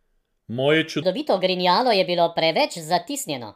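Speech, with a section at the wrong speed from 1.02 s to the end: playback runs 1.37 times fast, raising pitch about five semitones, likely from a clock mismatch.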